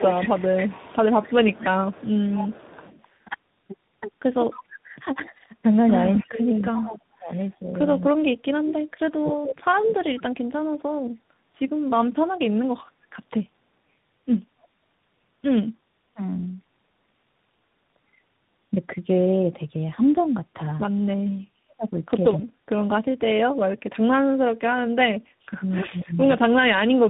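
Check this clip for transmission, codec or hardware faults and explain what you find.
Three kinds of fault are audible: tandem speech coding throughout, speech suppressed in double talk near the start and end, and echo leak in two places.

Tandem speech coding runs the full clip. The audio went through two speech coders in a row, consistent with G.729A at 8 kbit/s, then G.711 A-law, then G.726 at 40 kbit/s. Each stage re-encoded the previous one's artefacts, so the speech sounds rough, muffled and warbly, with nothing above 3.8 kHz.

Speech suppressed in double talk occurs from 0.00 to 2.82 s and from 21.06 s to the end at 27.09 s. The likely cause is an echo canceller that couldn't tell the near talker from loudspeaker echo while both sides spoke, so it turned everything down. Early on the dips total around 0.7 s and reach about 15 dB. Late in the clip they add up to roughly 4 s and bottom out near 40 dB, so the voice dips.

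Echo leak is heard from 0.00 to 9.4 s and briefly at 26.50–26.54 s. This is likely a loudspeaker on one side whose canceller let part of the microphone pickup through. A copy of the voice returns 0.27 s late, roughly 15 dB below the speech in the first stretch and about 20 dB below in the short later scrap.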